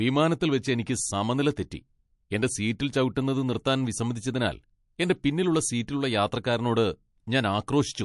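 From start to finish the speech has a plainly audible watery, swirling quality, with attacks smeared and nothing at all above 11.3 kHz, so the top octave is gone. This is likely MP3 compression at a low bitrate, consistent with about 48 kbps. With too few bits, the encoder drops weaker frequency components, which flicker in and out from frame to frame and create the swirl. It also applies a fixed treble cut-off.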